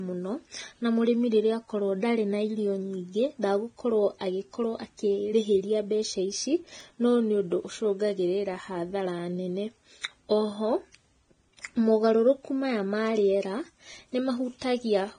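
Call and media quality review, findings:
Low-bitrate audio saved at a high bitrate: dull, band-limited speech throughout, with nothing above 9.7 kHz. The spectrogram shows a flat ceiling there. This is likely a low-bitrate source re-encoded to high-bitrate MP3, which cannot restore the discarded band or remove the first encoding's artefacts.

Repeated buffer at 6.80 s: a single brief click. Playback missed new data, so the last short block played once more with a hard join. The repeat lasts about 1.45 ms, which fits a 64-sample buffer, and about 1.5 ms of audio is lost. On the waveform it shows as a duplicated sliver with a step discontinuity, and on the spectrogram as a thin vertical broadband line.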